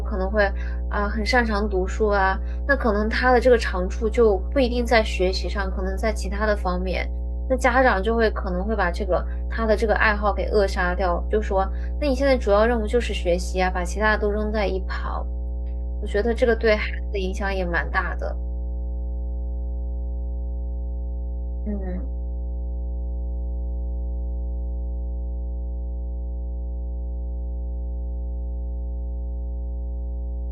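Mains hum at 60 Hz runs throughout the speech, a steady low drone with some low harmonics, loud, only a little below the voice, from power-line coupling such as a ground loop.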